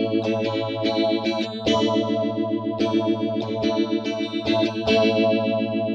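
Nothing stood out as a technical fault on listening.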